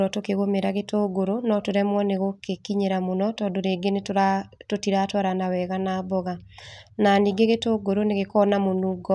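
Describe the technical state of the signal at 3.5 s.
At 3.5 s the speech signal is intact, with no audible fault at that moment.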